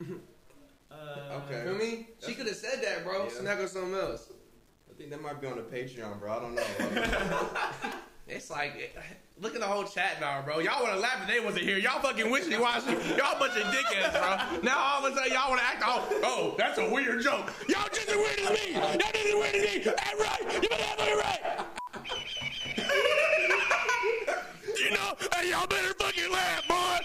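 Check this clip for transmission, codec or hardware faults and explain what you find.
One fault runs through the whole clip. The signal was likely reduced to a low bit depth without dither, rounded to coarse steps, which fits about 9 bits. The error tracks the signal, so quiet passages turn grainy and gritty, with distortion sitting roughly 40 dB below the sound.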